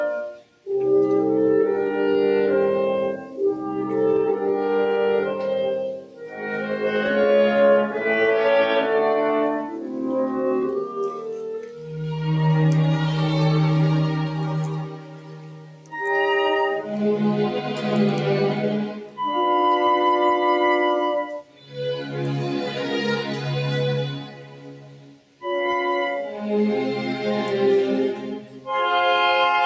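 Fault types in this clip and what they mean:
Noise suppressor applied to music or sounds, throughout: a suppressor built for speech stays active on this non-speech audio, treating sustained tones, ambience and reverb as noise and pulling them down, so the level swings by roughly 10 dB as it reacts.
Sound cut by the noise suppressor, 0.33 to 28.68 s: across this span, about seven seconds in total are judged to be noise and turned down, by as much as about 11 dB. Held and decaying sound is reduced while sudden onsets mostly pass.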